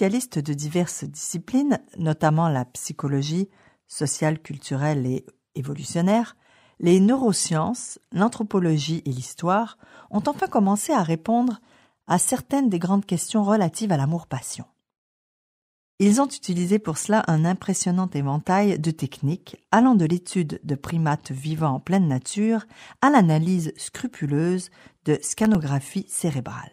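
From 25.34 to 25.55 s there is processor overload crackle: a handful of tiny buffers, each well under a millisecond, miss their deadlines and drop to silence. Unlike a single dropout or isolated click, the clustered hard-edged gaps form a brief gritty tear that stops abruptly.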